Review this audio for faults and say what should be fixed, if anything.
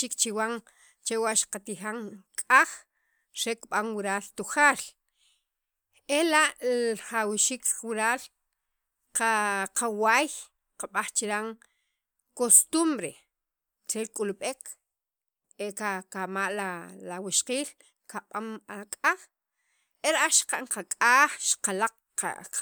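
Nothing in the recording needs fixing. No faults can be heard at any point in the speech, so there is nothing to correct or prevent.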